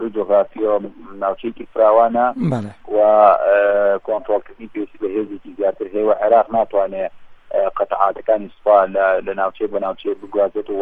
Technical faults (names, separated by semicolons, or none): none